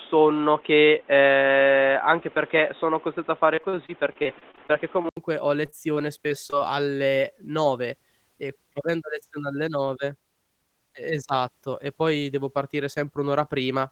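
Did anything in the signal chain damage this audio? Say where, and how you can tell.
Yes. From the start to 5.17 s the speech sounds dull and boxy, with nothing above 3.8 kHz and background noise only about 30 dB under the voice. At 5.17 s there is an 80 ms silence, after which the bandwidth opens up and the level shifts by roughly 5 dB. That points to the driver or device stage, most likely the input switching over from a poorer device, such as a headset's call profile, to a fuller one.

Two stretches sound choppy, with repeated packet loss giving a robotic quality. The first runs from 3.55 to 5.06 s, with about a dozen short holes, the longest 36 ms, and roughly a fifth of the span patched over. The second runs from 5.66 to 6.55 s, with a handful of holes up to 23 ms and about a tenth patched. This is network damage. Packets kept arriving late or not at all, and the receiver filled each hole by extending the last bit of sound.

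From 6.98 to 7.18 s the speech drags at about 85% speed without any change in pitch. This is a jitter buffer slow-down at the receiver. To rebuild a depleted reserve, it repeated single pitch periods or bits of pauses, adding about 37 ms to the passage.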